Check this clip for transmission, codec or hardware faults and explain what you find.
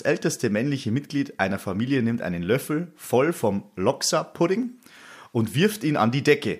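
One fault is present: clock drift buffer slips in the speech, recurring every 0.83 s from 0.49 s to 6.28 s. Each is a short, regular tick, most likely from two independently clocked devices, roughly a couple of hundred parts per million apart, dropping or repeating a handful of samples. The strict metronomic spacing distinguishes it from random packet-loss clicks.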